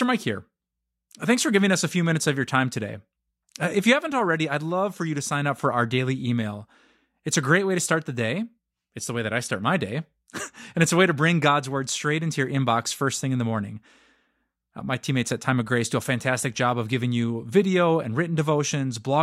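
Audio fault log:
No audible faults detected.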